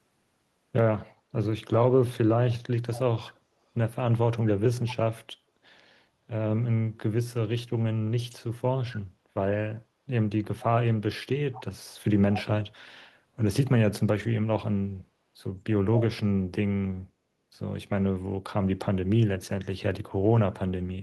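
At 2.51–2.55, 2.93–3.0, 4.88–4.95, 11.53–11.62 and 12.32–12.43 s, brief echo leak: a copy of the speech, about 10 to 30 dB below it, returns about 219 ms late, likely residue a loudspeaker-side echo canceller missed. Unlike room reverb, it is a distinct, fixed-delay repeat, not a smeared tail.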